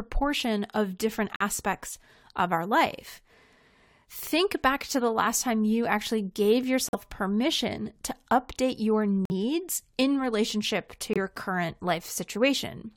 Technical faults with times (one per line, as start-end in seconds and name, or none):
1.36-1.42 corrupt frame muted
6.89-6.95 corrupt frame muted
9.25-9.32 corrupt frame muted
11.13-11.18 corrupt frame muted